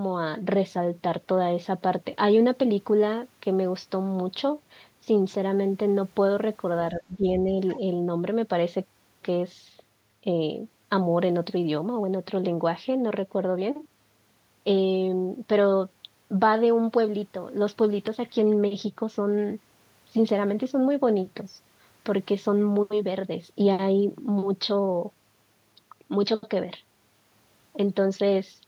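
From 6.91 to 7.25 s there is speech suppressed in double talk. The likely cause is an echo canceller that, with both ends talking at once, could not tell the near talker from the loudspeaker echo and turned everything down together. For roughly a third of a second the speech sinks, dipping by around 15 dB at its deepest, so the talker seems to duck away briefly before returning to full level.

Shortly after, from 7.70 to 7.78 s, comes a brief case of the other side's voice leaking through. This is likely residual echo: the far-end speech played on the talker's loudspeaker reached the microphone, and the canceller left a trace of it behind. It appears as a quick scrap of a second voice, only about 80 ms long and faint, sitting roughly 25 dB below the main speech.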